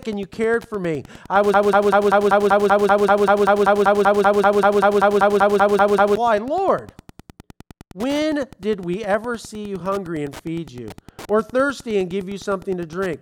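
Speech, with two faults. Wi-Fi interference runs through the whole clip. A steady ticking sits about 20 dB below the speech. It repeats every 102.4 ms, nearly ten times a second. That is the beacon rhythm of a nearby Wi-Fi radio, rectified by the audio circuit. A broken-record loop follows "cared for me I". From 1.54 s to 6.16 s, a fragment of about 0.19 s repeats exactly, back to back, 24 times. The stream likely stalled and kept resending its last fragment. The audio for that stretch is lost.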